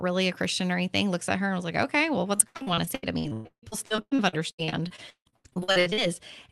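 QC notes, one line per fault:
2.35 to 6.20 s, repeated packet loss (robotic sound): across this stretch the speech breaks up into 34 separate gaps, the longest 156 ms, as audio packets keep arriving late or not at all. Each hole is papered over by stretching out the sound just before it, so about 42% of the span is patched-in sound. The run of closely spaced patches gives the choppy, robotic texture, riding on a call codec path whose bandwidth reaches up to about 12 kHz.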